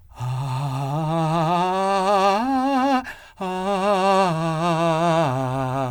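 A music clip with no audible technical faults.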